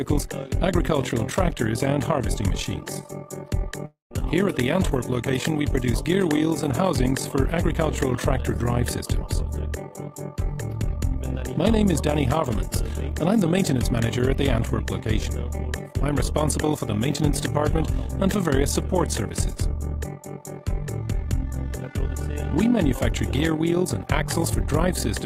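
Throughout the clip, frames were rejoined with an overlap that does not sum to constant gain. This overlap-add ripple makes the level pulse about 11 dB deep, around 40 times a second.

From 3.85 to 4.12 s, a long network dropout likely interrupted delivery. The receiver stretches the last sound into a fading fill, with about 130 ms of silence, before the audio resumes with roughly 260 ms missing.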